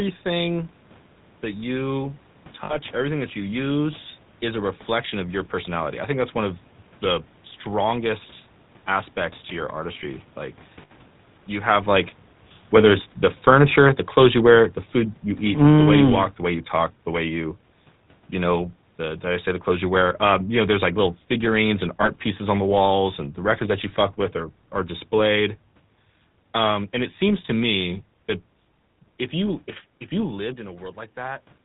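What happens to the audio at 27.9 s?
At 27.9 s the speech carries the GSM full-rate codec sound, as it does for the whole clip. The codec models the vocal tract and excites it with sparse regular pulses. Nothing above 4 kHz survives. The result is a plainly audible buzzy, gravelly roughness, which fits a 13 kbps GSM stream.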